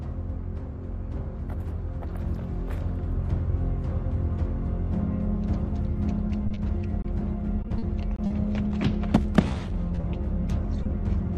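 Two short stalls from late packets come first, at 6.47 to 6.52 s and 6.54 to 6.58 s. The jitter buffer ran dry, and the receiver held the last sound for 30 ms and then 20 ms until the packets arrived. Nothing is lost, but the sound hangs briefly and playback delay grows by 30 ms and 20 ms. Short concealed packet loss follows at 7.02 to 7.06 s, 8.68 to 8.72 s and 10.83 to 10.87 s. Each time about 20 ms never reached the decoder and was patched by extending the preceding sound, giving a brief smear or wobble. Repeated packet loss makes the audio choppy from 7.62 to 8.32 s and from 9.22 to 10.05 s. The first stretch has five gaps, the longest 40 ms, with about a fifth of it concealed. The second has six gaps of up to 20 ms, with about 13% concealed.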